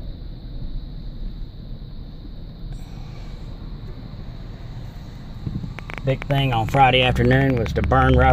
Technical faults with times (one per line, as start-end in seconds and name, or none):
5.79-8.31 train of clicks